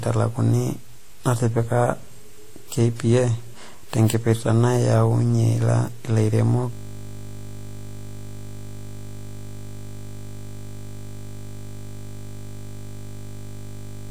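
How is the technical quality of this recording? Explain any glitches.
The quality is poor: two faults, one across the whole clip and one that takes over the second half.

Throughout, the speech has nothing above 16.5 kHz, with a mix of smeared, swirly and warbly artefacts. This is likely transcoding between lossy codecs, probably a Vorbis encode re-encoded as WMA at similar low bitrates. The second encoder spent bits on the first one's flaws, which is why two different artefact textures are heard rather than one codec's single signature.

From 6.73 s to the end, a system hang loop replaces the speech. A 20 ms slice repeats hundreds of times, giving a steady 50 Hz buzz because the sound hardware kept replaying its ring buffer after the system froze. Its exact, unchanging repetition sets it apart from random stutter or dropouts.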